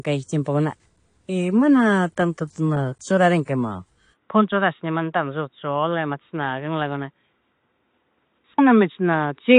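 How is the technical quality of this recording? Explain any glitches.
Quality is clearly reduced by one fault that lasts the whole recording. AAC compression, throughout: likely low-bitrate AAC-LC coding, which fits about 32 kbps, cuts everything above 9.9 kHz and coarsely quantises the rest, so the speech sounds dull and smeared, with fizzy sibilants.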